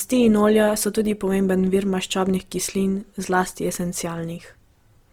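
From start to finish the speech has a rough, grainy texture rather than the swirling, watery holes of MP3. This points to Opus compression, likely at a low rate near 24 kbps, where starved bands are filled with noise.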